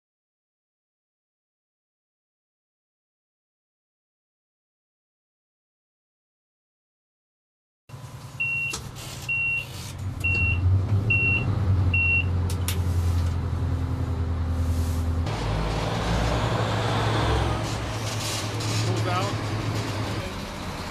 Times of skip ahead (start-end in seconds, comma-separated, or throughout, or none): none